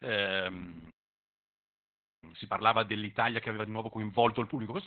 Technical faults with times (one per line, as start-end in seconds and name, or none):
0.00-4.86 Opus voice compression
2.24-4.86 time-compressed catch-up